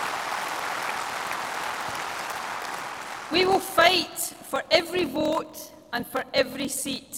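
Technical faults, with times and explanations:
Throughout, block size mismatch (padded): zero-filled gaps in every block give a steady 41.7 Hz buzz and slow the audio to 0.889 speed, yet timbre holds.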